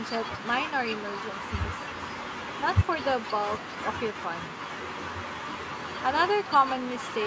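Echo with no canceller runs throughout. The far end's loudspeaker feeds its microphone, so the speech returns roughly 0.4 seconds late, about 23 dB down and thin.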